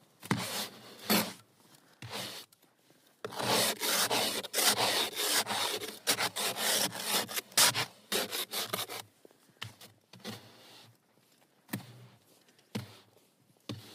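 One channel drops out at 1.94 s and stays out to the end. The sound abruptly falls by about 6 dB and never recovers, likely because one side of a stereo feed went silent, leaving the mono sum with half the shared signal.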